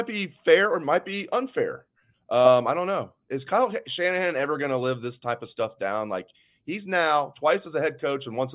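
Nothing technically wrong can be heard anywhere in the speech recording, with the signal continuous and steady throughout and no audible disturbance at any point.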